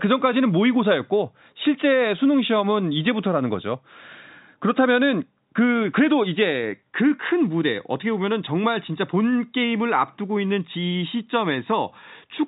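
Nothing stood out on listening to this telephone-band speech, which carries nothing above about 3.8 kHz, as expected of a G.711 telephone line.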